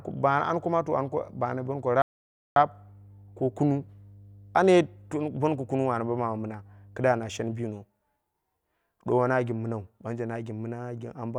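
Right from the start there's mains hum, a steady 50 Hz drone sitting underneath the speech until about 7.63 s, where it drops away. It's roughly 25 dB below the speech, so it's not overwhelming, but you can hear that low buzz with a bit of harmonic grit. That's the power line getting coupled into the signal chain, through a ground loop or a transformer sitting too close to the cabling.

Then at 2.02 s the speech just cuts out mid-flow and there's dead silence for about 540 ms, until it picks up again at 2.56 s. That's a playback stall. The output went quiet because the player had nothing to send, likely because its buffer ran dry or its audio thread got blocked for a moment. Once it recovered, the sound resumed.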